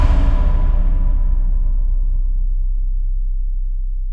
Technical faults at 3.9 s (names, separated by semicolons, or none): wrong sample rate